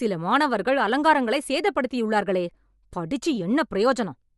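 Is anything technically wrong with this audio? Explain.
Yes. Throughout the speech there is plainly audible Bluetooth LC3 compression, likely from a low-rate link. Nothing above 11.5 kHz survives, and noise-filled upper bands add a grainy, breathy edge that a plain low-pass filter wouldn't.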